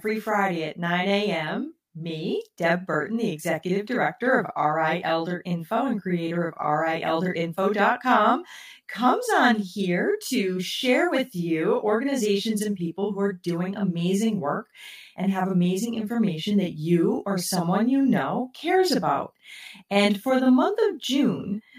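Across the whole recording, a channel delay (doubling) puts a second copy of the speech 40 ms behind the first at equal level, after one channel ran late and both were summed to mono. Each syllable sounds doubled, with a slapped edge. The waveform shows every onset repeated, and the spectrogram shows comb-like notches.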